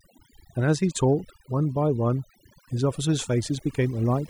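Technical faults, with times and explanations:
Throughout: overdone noise removal. A noise reduction stage has been pushed far too hard on this speech, so every frequency band that drifts close to its noise estimate gets pulled down sharply or switched off. The background noise between phrases collapses into near silence dotted with twinkling, chirpy specks where isolated bands flicker on and off, and the quieter components of the voice are stripped along with the noise.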